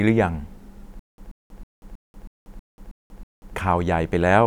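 From 0.99 to 3.54 s the speech breaks into a stutter with silent gaps. A 132 ms fragment repeats eight times. Each repeat is followed by 187 ms of dead silence, a steady 320 ms cycle. The likely cause is a stalled player replaying its last buffer. The speech meant for that stretch is lost.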